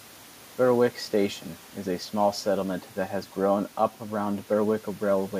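A short stretch of speech, and nothing technically wrong turns up anywhere in it.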